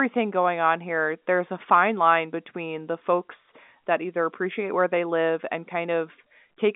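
No technical faults can be heard in the speech, which carries the narrow band of ordinary G.711 telephone coding, roughly 200 Hz to 3.6 kHz with nothing above about 3.8 kHz.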